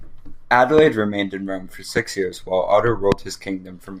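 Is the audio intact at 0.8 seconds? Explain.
No. A voltage spike, likely from a plug, switch or static discharge, hit the signal from 0.78 to 0.81 s, producing a single loud pop roughly 15 dB above the speech.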